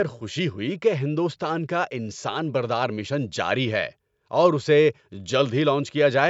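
Nothing stood out as a fault on listening; the speech simply carries the band limit of call microphone processing, with nothing above 8 kHz.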